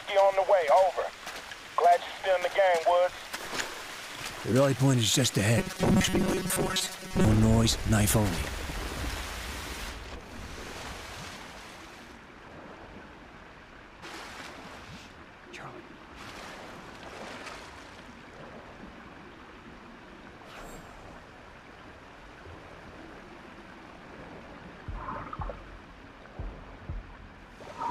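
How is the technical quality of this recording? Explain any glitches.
There is one clear glitch, from 5.58 to 7.25 s, where the sound turns into robotic sound from repeated short buffers. Fresh audio likely stopped arriving in time. The playback filled the gaps by looping a tiny slice of about 5.3 ms again and again. Most of the real audio in that stretch is skipped. The loop imposes a fixed 188 Hz buzz. The result is hard and metallic, yet it still loosely tracks the original sound's shape.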